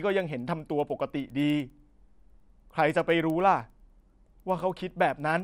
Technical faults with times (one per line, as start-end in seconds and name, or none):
0.00-5.43 resampler restarted on every block